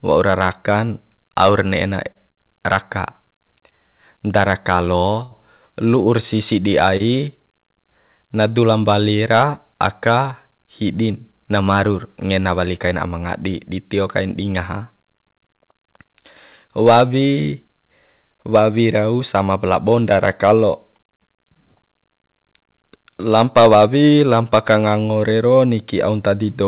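Speech heard over a telephone-band path with nothing above 4 kHz, which fits a G.711 mu-law call codec, and it has three kinds of network fault. Four short stalls from a late packet occur at 2.12 to 2.17 s (30 ms), 2.31 to 2.39 s (58 ms), 5.23 to 5.33 s (80 ms) and 6.97 to 7.02 s (31 ms). Each time the jitter buffer ran dry, so the receiver held the last sound until the packet arrived. That gives a drawn-out syllable with a slight buzz or dip and no audio lost, and it pushes playback later by the stall length. At 15.72 to 15.76 s a short concealed packet loss leaves about 20 ms of audio missing. The receiver extended the preceding sound for 15 ms and blended back, which is heard as a brief smear. Two jitter buffer speed-ups follow as the receiver trims the excess delay by cutting out pitch periods. From 16.64 to 17.76 s it runs at 104% speed and drops roughly 50 ms, and from 23.88 to 24.10 s it runs at 113% and drops about 40 ms. 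Both stretches keep their pitch, and the 113% one sounds hurried.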